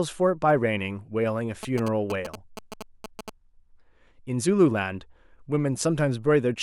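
A speech recording is interrupted between 1.63 and 3.30 s by GSM signalling bursts: a galloping dit-dit-dit of short buzzes pulsing at about 217 Hz, roughly 10 dB below the speech. A nearby 2G phone exchanging brief signalling bursts is being rectified by the audio circuitry. Unlike the steady buzz of an active call or continuous mains hum, this interference arrives in irregular clusters and stops entirely once the signalling ends.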